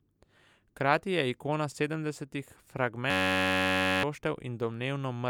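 Speech with a system hang loop from 3.10 to 4.03 s: the driver froze while the hardware kept replaying one 10.67 ms chunk, which fits a 512-sample buffer. That gives a steady 93.8 Hz buzz rather than a longer-buffer machine-gun stutter or a silent dropout, and about a second of speech is lost.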